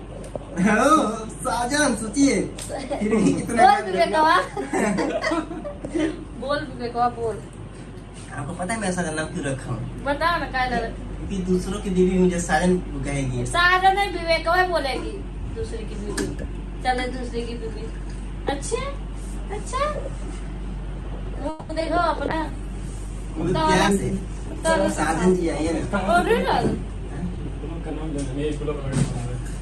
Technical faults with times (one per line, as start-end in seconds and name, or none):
21.49-21.71 call audio freeze
21.79-21.82 short concealed packet loss
22.30-28.15 call bitrate drop
23.88-26.27 jitter buffer speed-up
26.76-27.91 jitter buffer speed-up